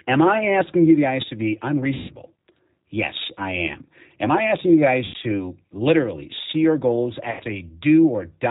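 Throughout, the speech passes through a G.729 codec, consistent with 8 kbit/s, which rebuilds each 10 ms frame from a vocal tract filter, a pitch predictor and a few pulses. Everything above 4 kHz is gone, and the voice sounds plainly rough and synthetic.

VoIP packet loss concealed by the speech codec strikes at 1.94 to 2.12 s, 5.05 to 5.15 s and 7.31 to 7.45 s, covering about 150 ms, then 90 ms twice. The decoder extrapolates its last pitch and filter with falling gain, so the sound smears into a fading buzzy tone or coloured noise. The voice stays weakened briefly after each gap.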